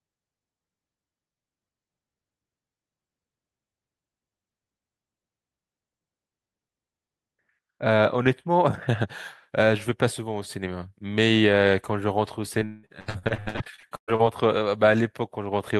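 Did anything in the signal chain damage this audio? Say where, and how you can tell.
Yes, the network leg of the call, from 12.59 to 14.21 s. That's repeated packet loss with robotic sound: 18 dropouts, the longest 181 ms, totalling about 0.9 s. Each was papered over by stretching the previous sound, so over half that stretch turns choppy and robotic.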